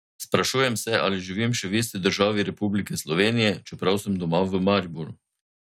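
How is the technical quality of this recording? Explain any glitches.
No technical faults are audible.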